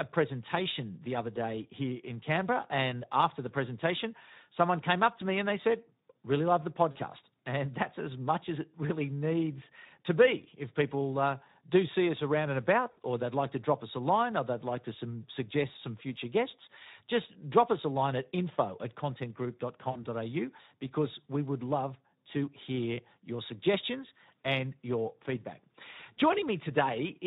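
From the start, the speech carries Speex codec damage that is plainly audible. The coder has too few bits for its excitation signal, so voiced sounds come out hoarse and grainy with a noisy edge, which fits a bitrate around 11 kbps. Unlike the swirling, watery artefacts of a transform codec such as MP3, this roughness follows the voice itself. Any content above 8 kHz is a shaped hiss rather than real detail.

At 6.91 s, 12.91 s and 19.91 s, VoIP packet loss concealed by the speech codec interrupts the audio for about 40 ms, 60 ms and 40 ms. This points to two, three and two lost 20 ms frames. The decoder keeps extending the last pitch and filter at falling gain, so each gap is stretched into a buzzy tone or coloured noise that fades rather than a silent dropout. The voice stays weak and smeared for a moment after packets resume.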